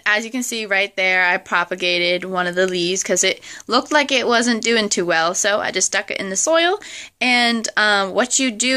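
No technical faults can be heard anywhere here.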